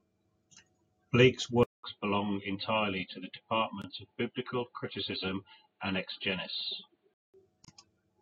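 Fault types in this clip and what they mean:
Input switched to a poorer device: from 1.63 to 7.34 s the speech dulls, losing everything above 4.6 kHz and dropping about 5 dB after a 200 ms silence, likely another microphone.
Gap at a join of encoded pieces: untrimmed encoder padding between joined segments leaves gaps of 21.6 ms at 3.82 s and 30.8 ms at 7.65 s.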